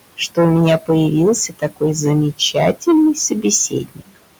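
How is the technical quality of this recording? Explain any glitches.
Technical quality is poor: the speech is heavily clipped throughout and processed by a noise suppressor that also swallows parts of the speech.

Hard clipping runs the whole clip. The signal is overdriven by about 15 dB, so roughly a tenth of samples hit the ceiling and are flattened. Unlike codec distortion, the result is a constant harsh fuzz on every loud syllable.

Noise suppressor artifacts are also continuous. The room noise, sitting about 16 dB below the speech, is pushed down by about 21 dB in gaps and rises under speech. That breathing with the speech distinguishes it from steady hiss.

Speech cut by the noise suppressor occurs at 1.48–1.82 s (up to about 19 dB down), 2.74–2.87 s (about 11 dB) and 3.70–4.23 s (about 22 dB). The suppressor mistook quiet speech for noise, so parts of the speech sound swallowed rather than abruptly muted as in a dropout.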